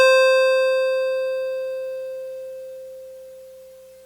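No technical faults can be heard in this music.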